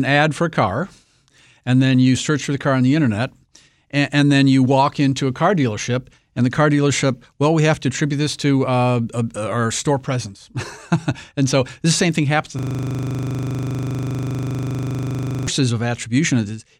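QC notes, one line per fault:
12.59–15.47 s, system hang loop: right after "same thing happens I", a rough 25 Hz buzz as one 40 ms slice repeats exactly while the system froze.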